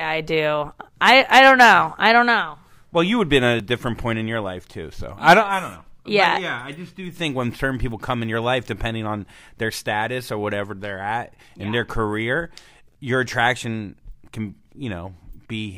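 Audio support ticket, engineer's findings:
Skips in speech at 3.60 s and 9.58 s, about 15 ms gone, ends butted together. Six-second spacing. Likely audio missing between chunks, lost at each chunk handover by the recorder.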